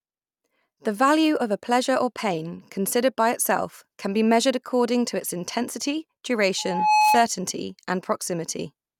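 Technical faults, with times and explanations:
6.58–7.27 s, loudspeaker feedback squeal: just after "according to its intensity", a pure 853 Hz tone swells over a little under half a second to roughly 5 dB above the speech, as the microphone picks up its own loudspeaker and loop gain there exceeds one.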